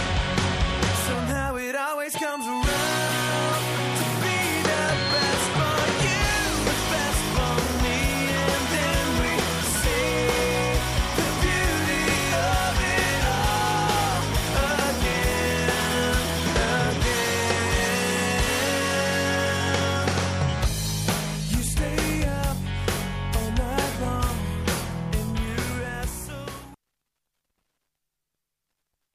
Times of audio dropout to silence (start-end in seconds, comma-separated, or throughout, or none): none